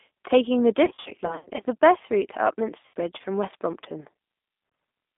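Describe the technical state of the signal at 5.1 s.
At 5.1 s the speech still carries the G.729 codec damage present throughout. Its filter-and-pulse rebuild, consistent with an 8 kbit/s stream, sounds plainly rough and synthetic. A spectrogram shows energy confined between 200 Hz and 3.6 kHz, with a hard ceiling above.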